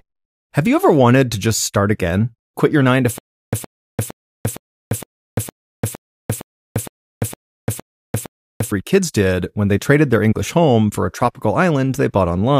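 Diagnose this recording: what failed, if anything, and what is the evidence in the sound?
Stutter with silent gaps from 3.18 to 8.72 s: a 116 ms fragment of speech repeats twelve times, each followed by 346 ms of digital silence, giving a steady 461 ms cycle. This likely comes from a stalled playback or stream buffer replaying its last fragment at each retry, so the intervening speech is lost.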